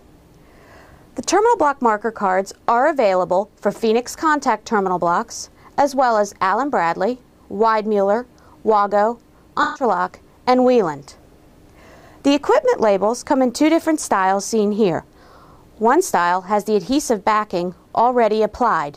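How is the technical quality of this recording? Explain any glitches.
Two brief glitches affect the recording. AAC frame loss with concealment occurs at 7.15–7.19 s and 9.63–9.83 s. The decoder patched missing frames from the last good spectrum. The first gap, about 21 ms, fits one lost frame and gives a quick smeared blip. The second, about 128 ms, fits several frames and sounds like a longer noisy, phasey wash.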